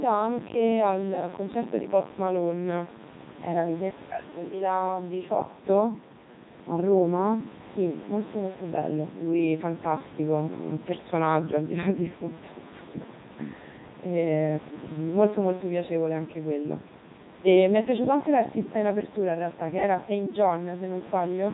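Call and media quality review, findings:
Robotic, buzzy speech throughout the clip, heavily damaged. Component: Codec 2 vocoder at 3.2 kbit/s. Mechanism: only pitch, voicing, energy and spectral envelope are sent. The decoder rebuilds the voice from sine waves and discards the original waveform.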